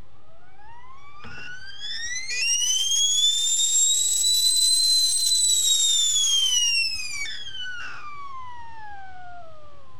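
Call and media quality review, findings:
DC offset, throughout. Constant shift of the waveform, about -32 dBFS. Not audible as a tone; shows as steady energy at 0 Hz and slightly reduced headroom. Probable component: capture front end or ADC bias. Distinct from mains hum: no 50/60 Hz line or harmonics. Distinct from rumble: level does not fluctuate.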